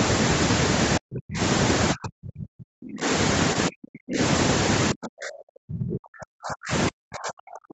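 From 0.99 to 1.4 s, 1.93 to 3.07 s, 3.54 to 4.2 s, 4.92 to 6.73 s and 6.89 s to the end, speech is suppressed in double talk, likely from an echo canceller muting the talker against far-end speech. The speech dips by up to about 40 dB or breaks up, showing as gaps or collapsed envelopes on the waveform and faded, patchy bands on the spectrogram.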